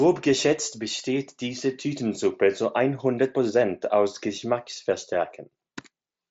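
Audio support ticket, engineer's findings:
No faults found in this speech recording; it's just the normal Bluetooth mSBC headset path doing its thing, with nothing above about 7.7 kHz, as you'd expect from that wideband link.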